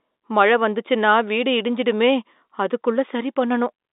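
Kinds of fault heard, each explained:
Nothing stood out as a fault on listening to this speech, which comes across with the narrow band of an ordinary telephone line.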